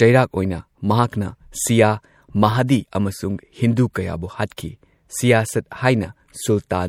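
MP3 compression runs throughout this speech, likely from a low-bitrate encode around 64 kbps: weak detail flickers, giving a watery, swirly sound with smeared consonant attacks.

Compressed frames skipped at 2.84 s: the audio jumps forward by about 50 ms, which fits two missing 26.1 ms frames. Overlapping neighbours turn the jump into a brief smeared blip rather than a click.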